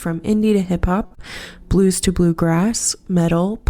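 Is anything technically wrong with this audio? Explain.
Yes, there are two brief network-related faults close together.

From 1.05 to 1.13 s there is a short stall from a late packet. The jitter buffer ran dry, so the last sound was held for 55 ms until the data arrived, and playback resumed with nothing lost. Unlike concealed loss, the sound is only held too long, with a faint buzz or dip.

From 1.15 to 1.29 s comes a short concealed packet loss. About 40 ms of audio never arrived, and the receiver covered the gap by extending the preceding sound for about 20 ms before blending back in. Unlike the stall, audio is actually missing here, heard as a brief smear or wobble where part of the sound drops out.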